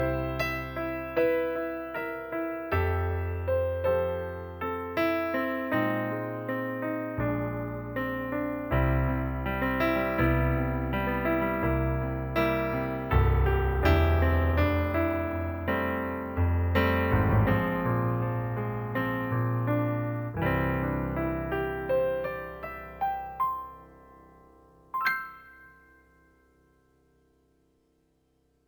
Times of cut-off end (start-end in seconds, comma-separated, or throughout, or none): none